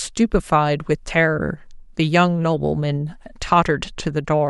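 No technical faults can be heard in this speech recording. Nothing in it stands out as a fault at any moment along its length.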